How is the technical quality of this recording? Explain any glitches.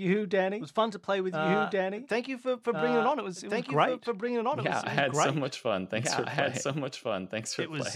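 The recording has one clear fault that runs its full length. Doubled audio track, throughout: the speech is likely captured twice, with a second copy arriving over a slower path about a second and a half late. That copy sits at roughly the same loudness as the original, full-band and with no reverb tail, so the speech overlaps itself as a dry, out-of-step duplicate.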